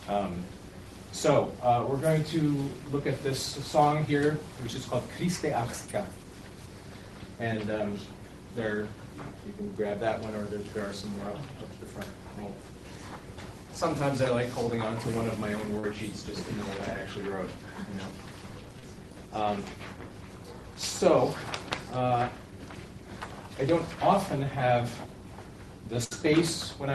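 Short concealed packet loss occurs at 15.79 s and again at 18.79 s, lasting about 58 ms and 52 ms. In both places roughly 40 ms of the call arrived too late for the decoder, so the receiver bridged the hole by extending the preceding sound for a little over 30 ms before blending back into the real signal. Each is heard as a brief smear or wobble. A burst of packet loss follows at 26.04 s, spanning about 85 ms near the end of the clip. Here about 60 ms went missing, a longer run than the single drops earlier. Concealment stretched the last sound for about 65 ms while turning it down, leaving a held buzz or fading hiss before the audio picks up further on with that stretch absent. All of this passes through a WebRTC call path whose top end stops around 12 kHz, which fits a low-bitrate Opus stream.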